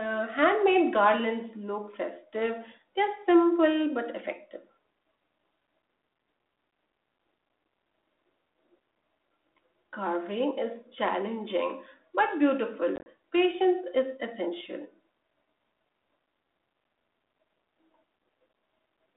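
From 12.96 to 13.06 s, packet loss on an ADPCM call leaves hard-edged silent gaps, up to 30 ms each. The decoder's predictor loses step, so the speech returns slightly distorted.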